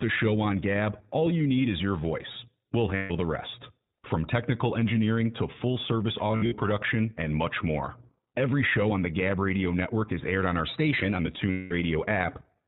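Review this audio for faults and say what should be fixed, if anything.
The whole recording passes through the iLBC codec at 15.2 kbps in 20 ms frames, and the damage is plainly audible. Everything above 4 kHz is gone, so sibilants are dull and the speech has a rough, slightly synthetic edge from iLBC's coarse excitation model. Each frame is coded independently, which trades some naturalness for robustness. To prevent it, carry the call on a wideband codec such as Opus or G.722 instead of iLBC.

Lost iLBC frames occur three times. From 2.96 to 3.12 s, just before "the rest", about 140 ms is missing, which fits seven dropped 20 ms frames. From 6.28 to 6.53 s, between "engineering to full service" and "production and much more", 160 ms is lost across a 240 ms stretch, with the longest gap around 70 ms. From 11.51 to 11.72 s, 200 ms is missing. In each gap the decoder repeats the last pitch cycle mixed with noise, which sounds like a held, buzzy vowel. 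Because iLBC frames stand alone, the speech recovers immediately afterwards. To prevent it, fix the packet loss on the network path and add a jitter buffer or forward error correction.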